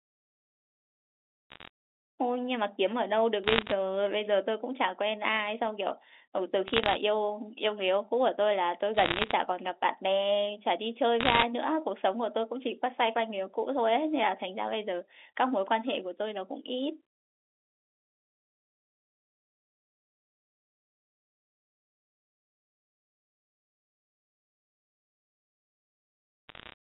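Bit errors on a digital phone line hit this G.711-coded speech in short bursts at 1.50–1.68, 3.44–3.72, 6.68–6.96, 8.94–9.32, 11.21–11.43 and 26.49–26.74 s. Roughly 0.5 to 1.5 percent of bits flip in these bursts, each error corrupting one sample, so the speech carries sharp ticks and crackle.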